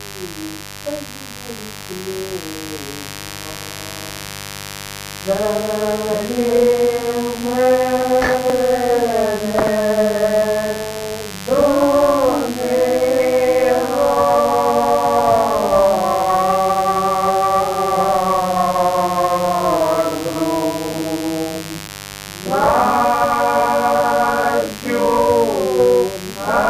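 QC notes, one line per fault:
throughout: mains buzz. A steady, raspy buzz sits roughly 15 dB below the signal, built on 50 Hz harmonics climbing well into the kilohertz range. Sharp switching spikes twice per mains cycle create that edge, unlike the smooth, pure tone of plain hum.
8.50 s and 21.88 s: dropped buffer (overrun). Each spot has a small forward jump in the sound, losing only a few milliseconds, and no gap of silence. This is likely samples overwritten before being read, splicing the two sides directly rather than muting.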